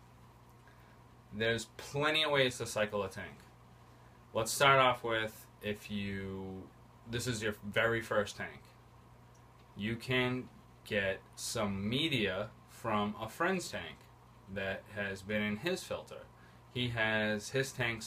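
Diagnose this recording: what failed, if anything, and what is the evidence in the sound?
Nothing failed; no fault is audible in this recording.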